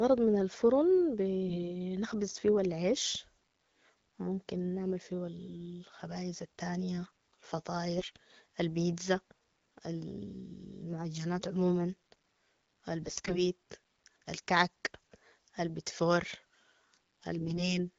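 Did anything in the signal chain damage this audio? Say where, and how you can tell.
Yes. The damage happened on the network link, as AMR bit errors in the radio path. Four bursts at 1.48–1.73 s, 7.98–8.16 s, 13.02–13.43 s and 17.40–17.78 s turn the speech hoarse, scratchy and gargly while pitch and level hold roughly steady. Flipped bits in the weakly protected parts of each frame misplace the excitation pulses and skew gain and spectral detail. The third burst sounds worst, with an error rate near a tenth of bits, against a few percent in the others.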